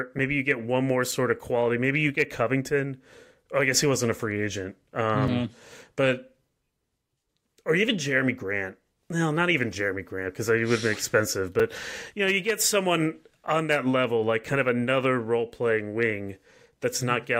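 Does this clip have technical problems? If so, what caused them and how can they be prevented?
Yes. The playback or processing chain failed to deliver audio in time on three occasions, and the output was filled with a block of digital silence instead. Each gap lasts 5 ms, which fits a buffer of a few hundred samples left empty. They fall at 1.12 s, 5.28 s and 11.6 s in this speech. Because the signal drops straight to zero and returns without any fade, each edge makes a discontinuity. At this length each gap is heard as a tick or dip rather than as silence. Prevent it by giving the audio thread higher priority and enough buffer headroom so that every block is filled before its deadline.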